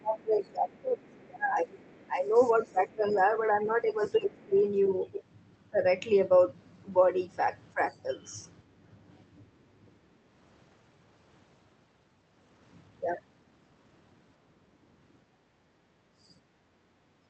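From 0.00 to 4.55 s the speech is repeatedly pushed down in pieces, by roughly 20 dB at worst and for about three seconds in total. This is speech suppressed in double talk. The likely cause is that the echo canceller could not tell the near talker from loudspeaker echo while both sides spoke at once, so it attenuated everything. On a waveform the envelope collapses in notches. A spectrogram shows the harmonics and upper bands thinning or vanishing in those gaps.

Over nearly the same span, 0.43 to 4.60 s, a faint second voice sits about 30 dB under the speech. This is the other side's voice leaking through, likely residual loudspeaker echo the canceller left in the microphone signal. It shows as weak, separate harmonic traces beneath the main talker.

From 7.74 to 8.06 s a shallow dip of about 5 dB, lasting only a few tens of milliseconds, again points likely to double-talk suppression. 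A brief scrap of leaked voice, about 35 dB down, appears from 7.90 to 7.97 s.

Between 8.63 and 9.66 s the room tone is background gated by the echo canceller. It drops by up to 10 dB for around a fifth of a second in total, then returns. The spectrogram shows dark gaps in the noise floor.

At 15.32 to 15.46 s a cut of roughly 20 dB, likely double-talk suppression, notches the waveform for about a tenth of a second. From 15.74 s to the end, the background is gated by up to 12 dB. Within that stretch, from 16.22 to 16.35 s, a leaked fragment sits about 35 dB below the speech, likely uncancelled echo.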